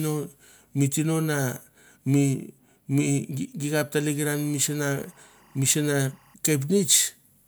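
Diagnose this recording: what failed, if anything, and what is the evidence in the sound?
Timecode bleed in the analogue wiring: from 4.34 s to 6.34 s a steady chirping warble sits behind the speech, well down in level at roughly 35 dB below it. It alternates between pitches near 1 kHz and 2 kHz, the two states of biphase-coded linear timecode. Its 23.976 frames-per-second cadence fits film-rate code crosstalking from an adjacent track or cable into the audio path.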